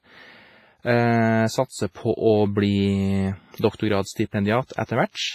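Right from the start the speech has that ringing, washy quality with a hiss that swells and fades with the signal, and nothing above 15.5 kHz. That's most likely WMA compression, heavily damaged, and the sound points to a low bitrate, around 24 kbps. Then there's pre-echo at 3.76 s, 4.65 s and 4.86 s: a brief hiss creeps in ahead of sharp attacks, spread over about 37, 48 and 31 ms. The codec's block-wide noise is leaking backward into the quiet moment before each onset, so those attacks come out softened and smeared.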